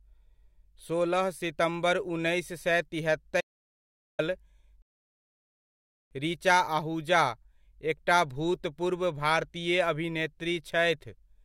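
At 3.41 s, right after "सोलह सितम्बर उन्नैस सए", there's an audio dropout to silence. The speech cuts out to silence, with no room tone at all, until 4.19 s. About 0.78 s of speech is simply gone, likely from the input briefly disconnecting or muting while recording carried on.

Shortly after, from 4.82 s to 6.11 s, there's a rebuffering stall. The playback just freezes into silence for about 1.29 s and then picks up exactly where it left off with "ऋचा आहुजा". Nothing's missing, but the pause stretches the timing.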